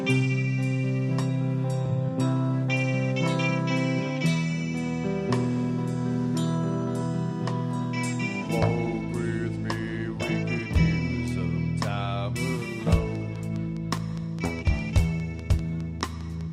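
From 13.15 s to 16.42 s a train of clicks runs over the sound: about fifteen sharp, near-identical pulses at a steady 4.9 per second, evenly spaced, peaking a few decibels above the programme level. They read as a regular ticking that carries straight through any quieter passages. The cause is likely an external pulse source, such as interference from nearby equipment or a faulty connection or power supply.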